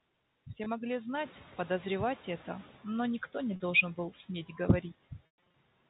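Packet loss with pitch repetition at 0.64 to 0.66 s and 3.56 to 3.60 s: missing audio, about 20 ms and 40 ms, is bridged by repeating the last pitch period, heard as a briefly held, buzzy tone.

Noise suppressor catching up from 1.14 to 2.81 s: after the room noise jumps by about 13 dB around 1 s, the suppressor's noise estimate lags, so the noise comes through under-reduced before sinking by about 10 dB over roughly 1.7 s.

Packet loss with pitch repetition again from 5.26 to 5.54 s: about 200 ms goes missing in scattered gaps, the longest 120 ms, so the repeated buzz fades into silence before the sound cross-fades back.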